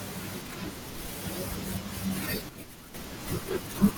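A short piece of speech with a sudden gain jump in the middle: at 2.49 s the level drops by about 8 dB in a single step, and it stays down until 2.94 s, where it snaps back up. The background noise falls and rises right along with the speech, so it's the whole signal being scaled rather than anyone talking quieter. That abrupt, unramped change points to a gain setting or bit shift likely being applied sample-to-sample with no smoothing.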